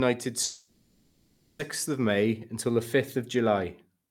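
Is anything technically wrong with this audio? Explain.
Yes. A long network dropout runs from 0.43 to 1.62 s. Audio likely stopped arriving, so a fading concealment buzz fills the whole gap, and the speech lost there never returns.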